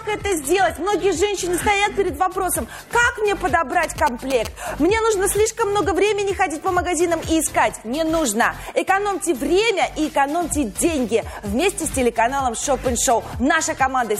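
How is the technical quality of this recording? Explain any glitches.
Two technical faults are audible: a low-quality start that steps up abruptly, and a short burst of mobile-phone interference.

From 0.0 to 2.0 s, an adaptive stream starting at a low bitrate is heard. The player opened on a cheap version to start fast, and the dull, artefact-laden opening, with nothing above 12.3 kHz, fits roughly 16 kbit/s HE-AAC. At 2.0 s it switches, with no gap, to a cleaner version consistent with 96 kbit/s AAC-LC.

From 3.83 to 4.47 s, GSM signalling bursts appear. A nearby 2G phone exchanging short control transmissions induced RF that the audio circuitry rectified, producing a galloping ticking and buzzing pattern repeating at 217 Hz, roughly 10 dB below the programme level.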